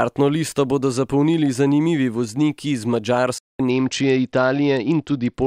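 Right after "zapolnili zanimivi vozniki iz", at 3.38 s, the speech cuts out in a playback stall and stays silent for about 210 ms, until 3.60 s. The likely cause is the player starving for data or its thread getting blocked before it picks back up.

From 3.70 s to the end, you get a Bluetooth SBC bit pool drop. The treble goes dull and a gritty noise sits over the speech, which points to the bit pool falling from around 31 to 9, roughly 72 kbps, on a congested link.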